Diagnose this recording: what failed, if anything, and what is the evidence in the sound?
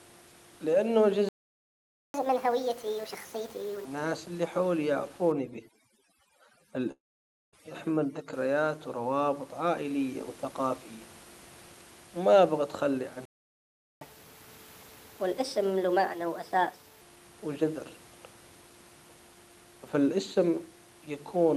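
The speech goes silent mid-flow from 1.29 to 2.14 s and again from 13.25 to 14.01 s. This is likely a playback stall, where the playback buffer ran dry or its thread was blocked.

After each gap the speech races ahead, higher in pitch. From 2.14 to 3.85 s it plays at 1.5 times speed, roughly seven semitones up. From 14.01 to 17.01 s it plays at 1.25 times, about four semitones up. This is catch-up at higher speed: the player resamples its backlog to recover lost time.

From 5.32 to 8.33 s the background drops and breaks up into twinkling specks. This is overdone noise removal in the call processing, cutting bands near its noise estimate along with quiet speech.

At 6.91 s the sound continues as a fading buzz or hiss, then drops to silence for about 0.54 s before resuming at 7.55 s with roughly 0.62 s missing. This points to a long network dropout, with concealment filling the gap until it gave up.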